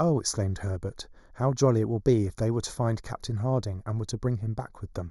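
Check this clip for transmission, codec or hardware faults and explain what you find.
One fault is present: channel delay (comb filtering), running through the whole speech recording. One channel arrives roughly a fifth of a millisecond behind the other, and when the two are summed to mono the shared signal cancels wherever the delay equals half a period. The first notch falls around 3 kHz, with more at odd multiples above it, so the speech sounds thin and phasey in the presence range. A spectrogram shows fixed dark horizontal bands that persist regardless of content, while the waveform itself looks unremarkable.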